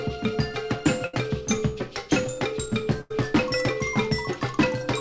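At 1.06 to 1.14 s and again at 3.01 to 3.11 s, a burst of packet loss occurs. The receiver stretches the last sound into a fading buzz or hiss, for 72 and 88 ms. The audio then resumes with about 70 and 90 ms missing.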